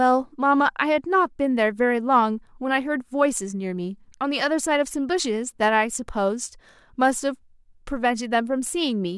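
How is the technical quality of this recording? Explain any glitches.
The recording has no technical glitches to explain. Nothing in the speech stands out as a fault at any point in the clip.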